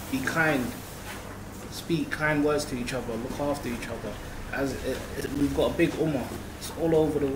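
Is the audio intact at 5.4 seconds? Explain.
No. From 5.21 to 5.41 s the sound breaks into a short burst of gritty crackle, with tiny hard-edged dropouts chopping through it, which is processor overload crackle. The processor fell behind and missed several buffer deadlines in a row, around five, and each missed slot was filled with silence. The spacing of the gaps points to buffers of roughly 10 ms, and the crackle stops as soon as the load eases, right around 5.4 s.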